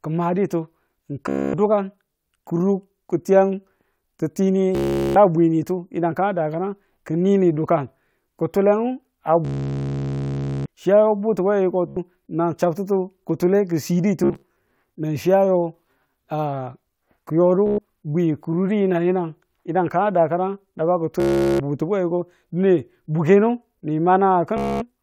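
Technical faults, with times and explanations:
1.29–1.54, 4.75–5.16, 9.45–10.66, 11.88–11.97, 14.24–14.50, 17.67–17.78, 21.20–21.60 and 24.57–24.82 s: Bluetooth stutter. Packets arrived late or were lost, so the receiver looped its last short slice, giving a buzzing machine-gun repeat. The longest, at 9.45 s, lasts about 1.2 s. Playback then resumes further on, skipping the gap.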